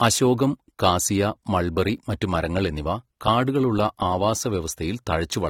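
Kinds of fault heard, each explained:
AAC compression: Throughout the clip, the speech carries plainly audible codec damage, most likely from AAC-LC at a low rate, with the texture pointing to something around 32 kbps. The encoder splits each frame into frequency lines and spends its scarce bits where hearing is most sensitive, quantising everything else coarsely. Here that leaves sibilants fizzy and sustained vowels smeared and warbly, with nothing present above 18.6 kHz.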